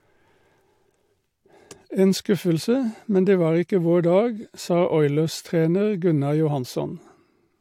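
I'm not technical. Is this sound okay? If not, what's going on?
Yes, this recording of speech is in good technical shape, with nothing going wrong in the audio signal itself at any point.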